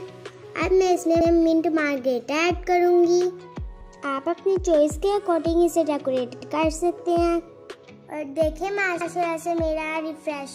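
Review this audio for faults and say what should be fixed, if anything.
The chunking stage handed on blocks of about 2.5 s, but at three joins the next block started 100 ms before the previous one had ended. These overlapping chunks make a short stretch of about 100 ms play twice in a row, heard as a stutter or click at 1.21 s, 6.41 s and 9.01 s. To prevent it, each chunk should begin exactly where the previous one stopped, or any overlap should be trimmed or crossfaded before playback.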